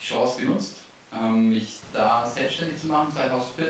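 The clip is speech, and nothing is technically wrong with it.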